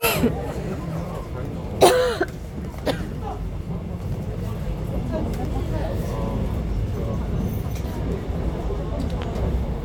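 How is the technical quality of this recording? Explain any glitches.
Two glitches stand out: two loud pops. A sharp single pop sits on top of the sound at 5.80 to 5.83 s, and a stronger one at 9.22 to 9.25 s, peaking around 10 dB above it, while the sound continues underneath. Each is likely a sudden voltage pulse, such as static or a switching transient, that entered the signal path.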